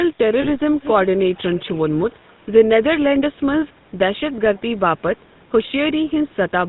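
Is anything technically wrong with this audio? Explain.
Yes. The speech has been through the GSM full-rate codec for its whole length, and there is one short concealment glitch near the start.

The GSM full-rate codec degrades the entire clip. It models the vocal tract and drives it with a sparse, regularly spaced pulse excitation, which fits the 13 kbps full-rate coder. The result is a plainly audible buzzy, gravelly roughness. On a spectrogram, energy stops abruptly at 4 kHz, and the harmonics look smeared and grainy.

Lost GSM frames cause a glitch from 0.42 to 0.48 s. About 20 ms of audio, consistent with one dropped frame, is replaced by repeating the last good frame's settings, giving a brief rough, metallic ring. The waveform shows a short, overly regular patch where the speech detail should be.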